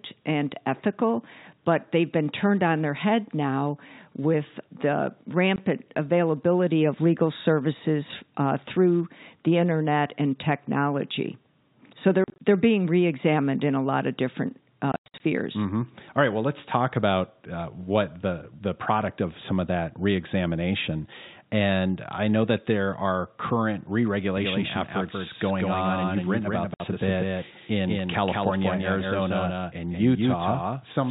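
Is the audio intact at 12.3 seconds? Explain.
No. From 12.24 to 12.40 s the speech is broken by packet loss filled with silence: about 100 ms of audio goes missing in several gaps, none longer than 40 ms. The missing packets are replaced with digital silence, so the speech stutters with hard-edged holes. A waveform shows flat silent stretches, and a spectrogram shows blank vertical slots with sharp edges.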